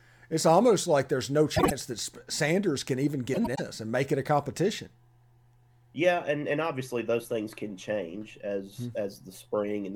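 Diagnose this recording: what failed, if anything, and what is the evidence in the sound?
The failure is frames out of order at the network or packet-delivery stage. Just after "almost like there's no", 1.56 to 1.71 s has a garbled flutter, as does 3.34 to 3.60 s, after "can even" and before "and make it a". In each stretch, two adjacent blocks (about 52 ms and 105 ms respectively, which fits runs of two and four codec frames) were exchanged and decoded in that order. On a spectrogram, formant tracks jump backward. No time is lost.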